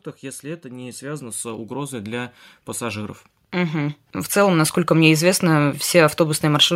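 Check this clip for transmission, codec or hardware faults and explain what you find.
There is one fault, automatic gain rising. From 0.41 s to 5.18 s the speech and its background noise swell together, ending about 16 dB louder. The automatic gain control judged the input too quiet and kept raising its gain over those seconds.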